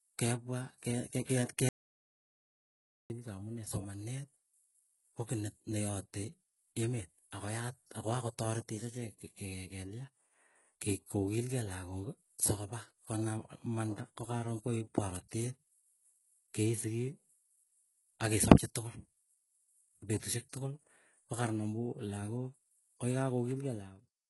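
Right from the start the speech carries heavy HE-AAC compression damage, most likely from a very low bitrate, something like 12 kbps. Nothing survives above 11.4 kHz, and the top end is patched in from lower bands, so s sounds come out gritty and a bit lispy.

At 1.69 s there's an audio dropout to silence, lasting 1.41 s until 3.1 s. It's plain silence with no room tone underneath, which points to the input likely being lost while recording carried on, so whatever was said there is gone.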